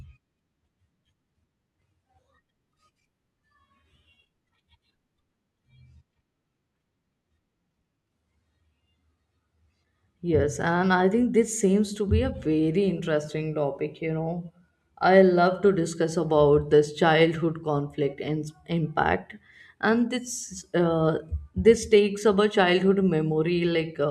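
Nothing is technically wrong with this speech clip.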